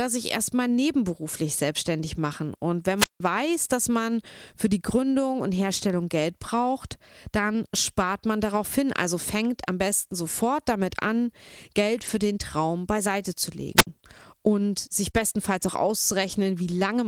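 This speech clip has brief rough, noisy patches at 2.11–2.17 s (just after "sich erstmal nebenberuflich"), 11.97–12.15 s, 15.15–15.21 s and 16.27–16.29 s, where the sound coarsens but never drops out. These are lost packets rebuilt from error correction: the decoder played the low-bitrate copies carried in the following packets, covering about 40, 100, 40 and 20 ms. That fits runs of 20 ms packets lost in transit. Twice a rise of hiss gives way to near silence before the voice returns, at 2.97–3.20 s (ending just before "weiß dass man für") and at 13.76–13.87 s (just after "beiseite zu"). That is a wireless microphone squelch dropout: the FM signal faded until the receiver muted its output, for about 168 ms and then about 65 ms. At 15.11–15.15 s there is a short smear where about 20 ms of audio never arrived in time. This is a short concealed packet loss, with the decoder extending the preceding sound to fill the hole before blending into the rebuilt frames that follow.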